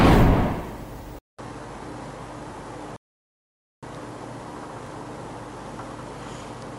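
At 1.19 s the sound drops out for about 200 ms and returns duller and boxier, with nothing above 11.4 kHz and faint new background noise well below the signal, while the loudness stays about the same. The likely cause is an input switched to a poorer device. On a spectrogram, a short blank gap gives way to a hard ceiling across the upper band.

From 1.48 to 1.50 s, and again from 4.87 to 4.89 s, overlapping chunks produce a brief click-like stutter as a sliver of about 21 ms plays twice. The chunks are 2.5 s long. A waveform shows the same small stretch duplicated at each seam.

From 2.96 to 3.83 s a rebuffering stall cuts the audio to silence for about 0.86 s. The sound then resumes exactly where it stopped, so nothing is lost but time is added. The waveform shows a flat gap, and the spectrogram shows a blank vertical band.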